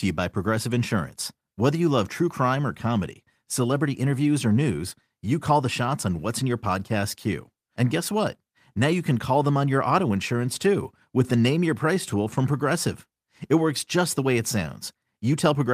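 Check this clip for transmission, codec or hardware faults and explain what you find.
No transmission, codec or hardware faults can be heard in this speech recording, and the signal carries through with no break or disturbance along the way.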